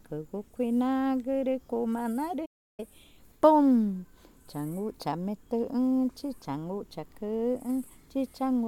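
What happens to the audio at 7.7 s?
Nothing goes wrong at 7.7 s; the audio carries on intact through that moment, with no dropout, click or other fault to be heard.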